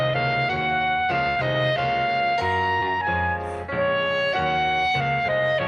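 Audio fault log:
1.29 to 1.38 s, burst of packet loss: roughly 60 ms of audio never arrived in time to be played, so the receiver carried the last sound forward for about 64 ms, lowering its level as the gap went on. What was tonal turns into a held buzz and noisy material into a fading hiss. Playback then picks up further along, and the stretch in between is simply gone.
2.80 to 2.83 s, short concealed packet loss: about 20 ms of audio went missing, and the decoder filled the hole with some 16 ms of synthesized continuation built from the preceding sound before blending back into the real signal. The result is a brief smear or wobble rather than a clean gap, and any short transient that fell inside the missing piece is lost. The band-limited, coded character of the call audio carries straight through it.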